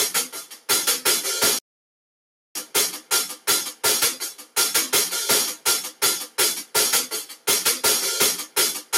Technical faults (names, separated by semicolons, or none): integer overflow; noise suppressor applied to music or sounds; sound cut by the noise suppressor; playback stall